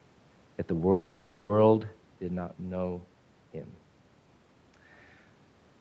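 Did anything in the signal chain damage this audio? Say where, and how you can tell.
Yes. At the network and jitter-buffer stage there is a call audio freeze from 0.91 to 1.51 s: packets likely stalled in transit and the buffer ran dry, so the receiver stretched the last sound into a fading buzz for about 580 ms. Playback then resumes where it stopped, so nothing is lost, only delayed.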